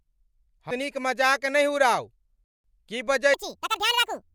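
At 2.44 s the speech cuts to silence until 2.64 s, a rebuffering stall: playback ran out of downloaded audio and waited for more, adding about 0.2 s. Unlike a dropout, nothing is missing; the speech resumes exactly where it halted.

From 3.34 s to the end, a section at the wrong speed plays 1.77 times too fast, raising pitch about ten semitones, likely from a clock mismatch. The speech turns high and hurried together, which separates it from a pure pitch shift, where tempo would stay unchanged.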